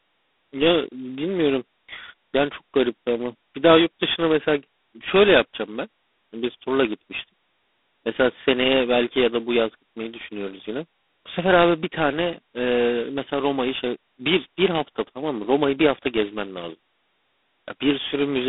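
Throughout, the speech carries heavy G.726 ADPCM damage. Too few bits code each sample's prediction error, which fits 16 kbit/s, so a rasping hiss rides the speech level rather than swirling like transform-codec artefacts. The band spans 250 Hz to 3.6 kHz, nothing above 3.8 kHz.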